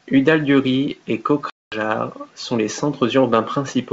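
Speech over a G.722 wideband link, with the audio dropping into a hard-edged silent gap from about 1.50 to 1.75 s before "sont les" returns slightly distorted. This is packet loss on an ADPCM call: around 220 ms was lost, which fits roughly ten packets, and the decoder's predictor fell out of step with the sender.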